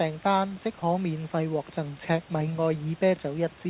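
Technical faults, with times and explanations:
0.80 s, sound dropped by the voice detector: the sender's voice detector likely took the sound between "單即" and "免費" for background and briefly stopped sending. A 20 ms stretch becomes steady comfort noise, and 10 ms of speech is lost.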